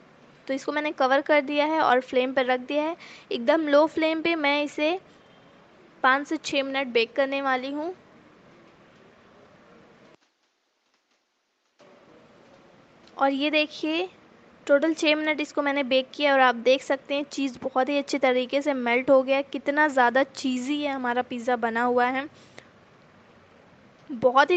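No technical faults are audible anywhere in this audio.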